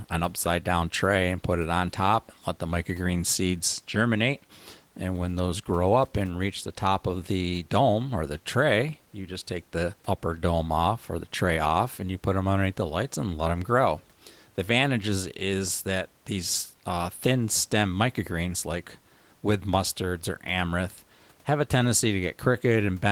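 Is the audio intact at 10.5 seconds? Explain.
Yes, the speech is intact at 10.5 seconds, with only the room's own background noise sitting about 38 dB below it.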